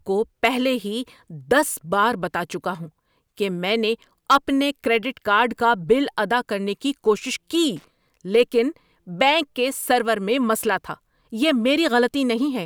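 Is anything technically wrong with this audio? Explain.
Yes. A stage in the speech signal's path was overdriven, so the peaks were cut flat. This hard clipping occurs at 0.45 to 0.47 s, about 3 dB over the limit, and again at 4.31 to 4.36 s, about 6 dB over, just after "ہوں کہ میں نے" and before "اپنے کریڈٹ". The squared-off peaks add high harmonics, heard as a brief harsh crackle on those loud moments, stronger in the second.

A contact in the signal chain briefly lost and regained connection from 7.77 to 7.84 s. This loose connector crackle chops the signal on and off in quick, uneven succession. It comes through as a short irregular burst of scratchy crackle lasting under a tenth of a second.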